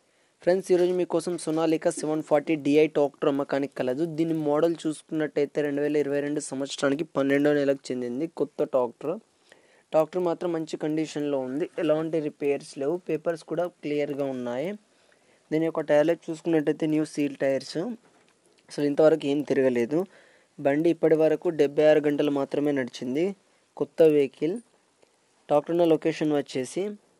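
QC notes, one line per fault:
throughout, resampler restarted on every block: each 50 ms chunk gets converted on its own, so the edges glitch, giving a 20 Hz tick-buzz riding under the signal, which fits 24 kHz to 48 kHz upsampling.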